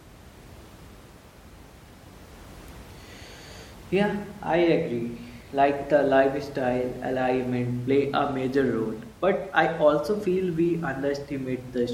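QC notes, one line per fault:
No technical faults heard.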